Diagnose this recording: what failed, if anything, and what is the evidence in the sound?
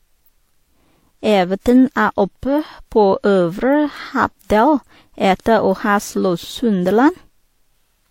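Throughout the speech there are two layers of compression damage at once: a smeared, watery quality in the upper range, overlaid with a second, differently textured grittiness. Nothing is present above 16.3 kHz. At the codec stage this likely points to transcoding between lossy codecs. A low-rate HE-AAC pass, around 32 kbit/s, was re-encoded to WMA at around 96 kbit/s. The WMA encoder spent its bits preserving the earlier artefacts and then added its own.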